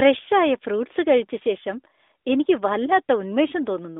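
No faults are audible in the speech, which sits within the narrow 250 Hz to 3.7 kHz band of an AMR-NB mobile call.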